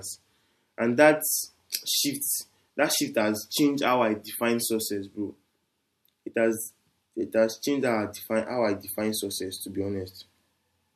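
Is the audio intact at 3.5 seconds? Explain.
Yes, at 3.5 seconds the speech plays through intact, with no dropout, click, distortion or other fault at that point.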